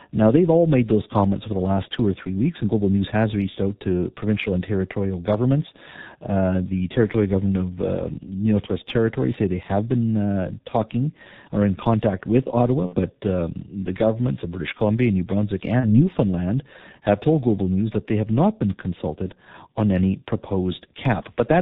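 From start to end, the speech carries heavy G.723.1 codec damage. Nothing above 4 kHz survives. The coarse voice model, which fits a rate near 6.3 kbit/s, makes the voice muffled and hoarse. Consonants smear together.

At 12.86 to 13.00 s and 15.80 to 16.10 s comes VoIP packet loss concealed by the speech codec. The decoder stretches its last sound into a buzzy tone or coloured noise that fades. The first gap fits two lost 30 ms frames, the second one. Recovery stays weak afterward.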